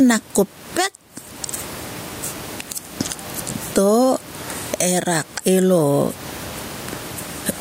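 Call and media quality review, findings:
Gain pumping, whole clip. Swing of around 20 dB. Room noise, about 36 dB below speech. Likely cause: microphone gain set far too high, with a fast limiter or compressor clamping each peak. Level drops on every loud sound and recovers in the gaps. Dynamics squashed. Loud and soft passages sit close in level.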